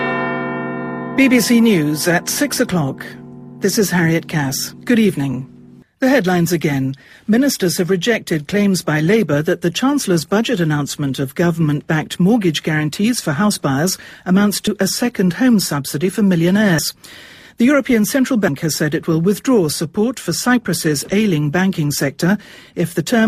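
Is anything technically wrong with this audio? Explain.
Yes, there are compressed frames skipped at 14.67, 16.78 and 18.48 s. Chunks of decoded audio go missing, roughly 70 ms at the first and about 100 ms at the others, which fits two or three dropped 32 ms frames. At each join the audio jumps ahead by the missing length.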